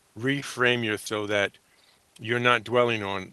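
At 1.06 s, just after "reframe your", there is a skip ahead: about half a second of audio is missing and the two sides are butted together with no gap at all. Audio was dropped, either on the way or when an overfull jitter buffer discarded it, while later audio was already queued. That shortened the playback delay by roughly the same half second. Unlike a dropout or packet-loss concealment, nothing fills the hole, neither silence nor a smeared guess. The sound simply jumps forward.

From 1.18 s to 3.18 s a jitter buffer speed-up follows. The buffer was still holding more audio than it aims for, so the receiver repeatedly cut out short pieces of one or a few pitch periods, about 150 ms in total. The speech runs at about 108% speed and sounds hurried, but its pitch is unchanged. That separates it from a resampling or clock-rate error, which would raise the pitch along with the tempo. The whole clip also carries the coding texture of the Opus call path, with content above 12 kHz cut off, which fits a bitrate of about 24 kbps.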